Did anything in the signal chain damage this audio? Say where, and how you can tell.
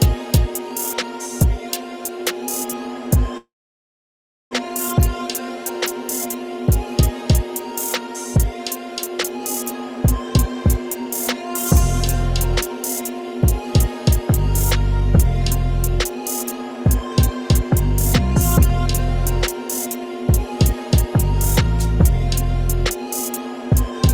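Yes. From 3.37 to 4.55 s the sound decays into a fading buzz or hiss, then about a second of silence, likely a long network dropout losing that audio.

From 9.96 to 11.02 s, a jitter buffer speed-up runs audio at 104% with unchanged pitch, cutting pitch periods totalling about 50 ms to reduce delay.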